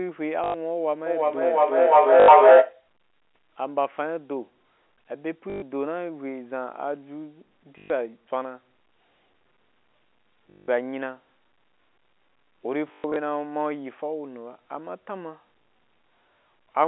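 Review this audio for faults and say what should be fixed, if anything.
Packet loss with the last packet repeated occurs at 0.44, 2.2, 5.5, 7.78, 10.5 and 12.88 s. The gaps last 100, 80, 120, 120 and 180 ms. The last one is 180 ms spread over 280 ms. Missing audio is filled by replaying the previous packet, which buzzes near 50 Hz, consistent with 20 ms packets. It sounds like a robotic stutter. Proper loss concealment or forward error correction, plus a more stable network path, would prevent it.

Feedback echo between two devices runs from 1.06 to 2.87 s. Two devices in the same room share the call, and one microphone picks up the other's loudspeaker. The sound returns roughly every 0.4 s. The repeats pile up to about 14 dB above the speech rather than fading, and grow thinner and more ringing. Muting one device's microphone and speaker, or leaving the call on one device, would prevent it.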